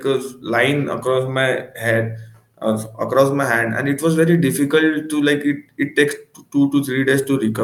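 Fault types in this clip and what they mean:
No faults detected in this speech recording.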